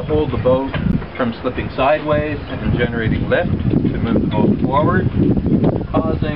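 From start to finish the audio has a watery, swirling texture, with the treble cut off at a fixed point and faint high detail that flickers in and out. That is MP3 compression damage, likely from an encoder starved of bits, at a rate that fits about 64 kbps. With too few bits, the encoder discards the upper band and zeroes weak frequency lines, and they switch on and off between frames. Unlike a steady low-pass filter, the loss keeps shifting.

From 0.92 to 0.94 s a short, harsh burst breaks through and peaks around -5 dBFS. It is a corrupt frame decoded: damaged bits in a couple of compressed frames were played anyway, so misread gains and codes threw energy into the wrong frequencies for about that long. Unlike a click or dropout, it is a brief burst rather than a single spike or a gap of silence.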